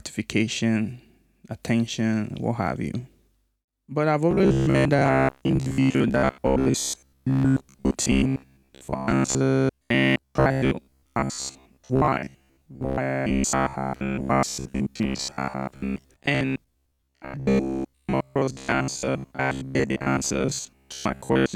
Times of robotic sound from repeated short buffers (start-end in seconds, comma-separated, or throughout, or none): 4.31-21.55